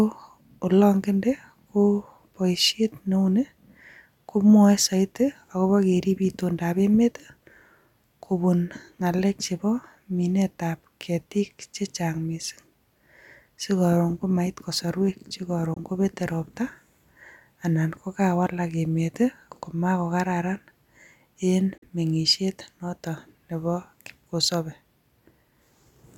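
At 15.74 s, just after "komait kosorwek", the speech cuts to silence for about 21 ms. At 21.78 s it drops out again for about 43 ms, ending just before "boishiet notok neboo kipkosopei". Both gaps have abrupt or briefly faded edges, and the speech resumes as if it had kept playing. These are likely Bluetooth dropouts, where audio packets missed their deadline at the headphones. The gap lengths fit one and then two lost frames.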